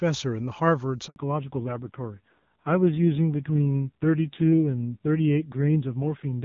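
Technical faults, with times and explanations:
1.08–1.16 s, handover gap: the call switches networks and no speech frames arrive for 80 ms, so the sound dies away quickly and stays silent until the new link starts.
1.16 s to end, fallback to narrowband: after clear wideband HD Voice, the call drops to a narrowband codec. Nothing above 4 kHz remains, and the duller, rougher texture fits a low rate near 5.9 kbit/s.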